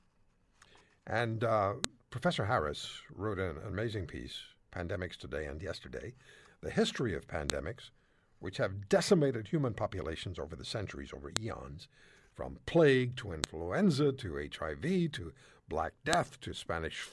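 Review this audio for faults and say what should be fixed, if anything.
File header played as audio, at 1.84, 7.50, 11.37 (just after "over the centuries over"), 13.44 (just after "from plague to") and 16.13 s. Each is a sharp, loud snap, abrupt regardless of the speech around it. The speech was assembled from separate WAV pieces joined without stripping their headers, so each header's few dozen bytes were read as sample values and played as a burst. To fix this, strip every segment's header and keep only the audio data when concatenating or streaming.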